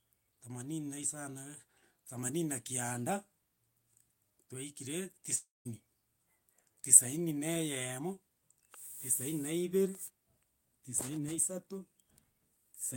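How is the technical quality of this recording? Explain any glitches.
One glitch stands out in this speech recording. At 5.35 s the speech abruptly smears into a buzzy, hissing tail that fades away, leaving near-silence for about 0.19 s before speech returns at 5.67 s, with roughly 0.3 s of it gone. This is likely a long network dropout: packets stopped arriving, the receiver stretched the last sound it had into that decaying buzz, gave up, then resumed once audio reached it again.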